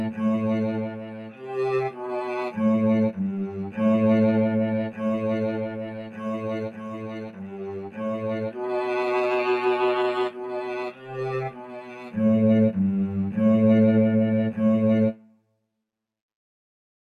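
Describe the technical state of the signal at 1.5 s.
At 1.5 s you're right at the tail end of a sound cut by the noise suppressor, a dip that runs from 0.84 to 1.5 s. The suppressor decided this stretch was noise and pulled it down harder than everything around it, bottoming out at about 11 dB below where it should sit. Because steady and decaying material gets hit hardest, the sound sinks and its fade gets clipped short, so by 1.5 s it's just climbing back out of that hole.

Under that, a noise suppressor applied to music or sounds is running across the whole clip. It was built for speech, so it treats sustained tones, ambience and reverb as junk to be removed. Its gain moves a lot, swinging somewhere around 15 dB. Sharp onsets slip through while held material and tails get squashed, which gives the audio a pumping, fluttery, thinned-out character that's present at 1.5 s too.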